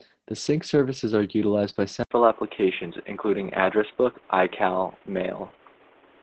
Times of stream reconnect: none

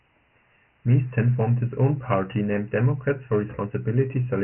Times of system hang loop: none

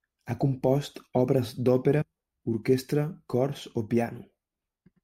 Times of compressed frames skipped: 2.01

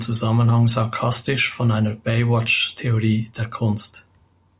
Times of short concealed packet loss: none

